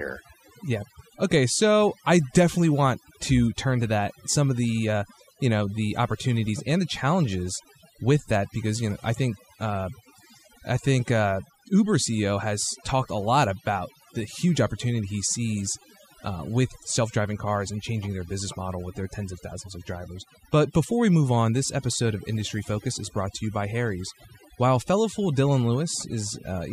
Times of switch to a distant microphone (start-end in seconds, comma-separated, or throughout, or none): none